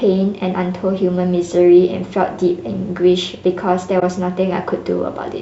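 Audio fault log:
3.99–4.03 s AAC frame loss with muting. The sound dips into a brief soft-edged gap. The decoder zeroed what fits one lost frame, and overlapping windows fade it smoothly.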